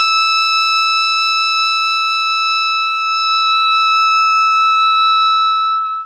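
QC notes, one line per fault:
No faults found in this music clip.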